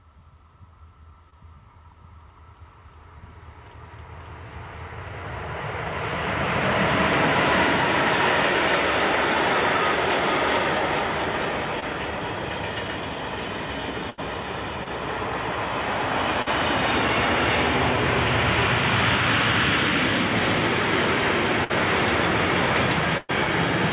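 Audio carried over a narrowband call path, with nothing above 4 kHz, consistent with 64 kbps G.711 A-law, shows two kinds of fault. Short concealed packet loss at 1.3, 11.8, 14.84 and 16.42 s (about 20 ms missing each, 40 ms at 16.42 s) is audible as brief smears, where the decoder continued the previous sound; on a spectrogram these are tiny smoothed patches. Bursts of packet loss at 14.1, 21.64 and 23.17 s drop 80, 60 and 120 ms. Concealment holds the prior sound and fades it, so the waveform shows a decaying repeated stretch and the spectrogram a flattened smear before the audio resumes further on.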